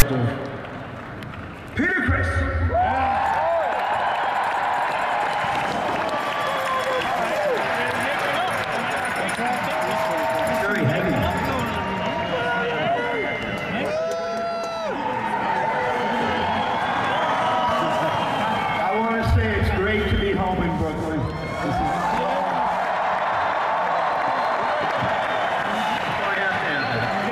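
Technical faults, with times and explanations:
0.00 s, file tags played as audio: a brief burst of harsh static with hard edges opens the clip. A block of text tags at the start of the file is decoded as samples, producing a loud rasp pushed to one side of zero before the audio proper begins.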